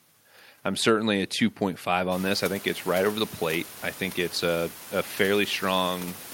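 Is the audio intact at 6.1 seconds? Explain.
Yes, the speech at 6.1 seconds is intact, with only the room's own background noise sitting about 18 dB below it.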